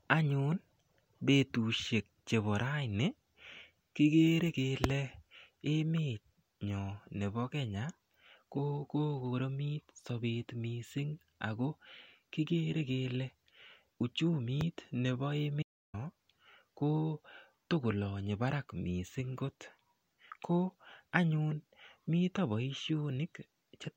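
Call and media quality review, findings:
Audio dropout to silence, 15.63 to 15.94 s, about 310 ms lost. Speech cuts off mid-flow, then resumes abruptly. Likely input loss upstream (device disconnect, link failure or mute) while the encoder kept writing silence. Waveform: flat line, hard edges both sides. Spectrogram: full-band black vertical stripe, no room-tone floor. Content in the gap unrecoverable.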